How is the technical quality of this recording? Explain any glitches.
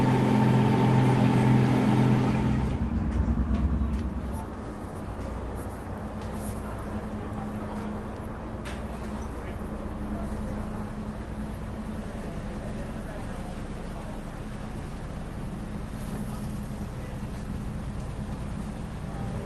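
No glitches or faults detected.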